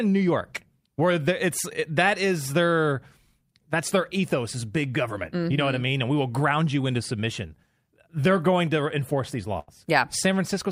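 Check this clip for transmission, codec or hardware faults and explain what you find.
One fault: a burst of packet loss at 9.59 to 9.70 s, right after "going to enforce these". For about 80 ms the receiver extends the last sound, fading it into a held buzz or hiss, then speech resumes with that stretch missing.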